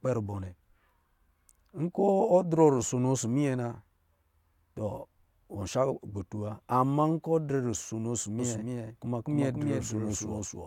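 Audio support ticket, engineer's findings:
Doubled audio track from 8.39 s through to the end. Same speech comes back about 0.3 s late, a few dB under the original, full-band and bone dry with no room tail, and it cuts in abruptly. Likely a second capture path running slow, or an edit leaving two out-of-step copies stacked. Worth checking the routing for a duplicate feed.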